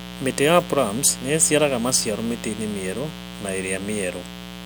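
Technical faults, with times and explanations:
Throughout: mains buzz. A steady, raspy buzz sits under the speech at a level not far below it, roughly 15 dB down. It comes from sharp switching spikes, twice per 60 Hz cycle, leaking in through a dimmer, rectifier or poor shielding. The spikes' harmonics of 60 Hz climb well into the kilohertz range. On a spectrogram this shows as a comb of evenly spaced horizontal lines running the full clip; the waveform carries a repeating spiky pattern every 8.3 ms.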